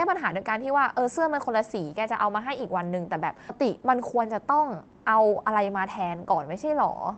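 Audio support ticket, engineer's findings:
Skip ahead at 3.49–3.51 s. Playback jumps forward with no fill, and around 0.7 s of sound is missing. The two sides are spliced nearly directly. Probable component: jitter buffer, discarding a late stretch on overflow or after loss in transit while newer audio was already queued.

Jitter buffer speed-up, 3.6–5.49 s. Audio plays about 114% fast at unchanged pitch and sounds hurried. The receiver trimmed repeated pitch-period-length pieces, roughly a third of a second in total, to drain excess buffered delay. The top end is cut near 8 kHz, consistent with Opus at a low bitrate around 20 kbps.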